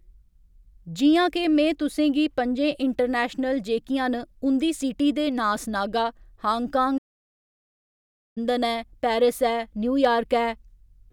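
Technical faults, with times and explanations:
6.97 to 8.38 s, playback stall. The speech stops mid-flow and the output goes silent for 1.38 s. Then the sound carries on. The player likely ran out of data or had its thread blocked, so nothing reached the output until it recovered.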